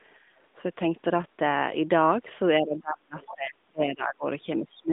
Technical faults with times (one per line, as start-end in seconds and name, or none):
2.61-4.25 speech suppressed in double talk
3.20-3.28 other side's voice leaking through
4.60-4.93 speech suppressed in double talk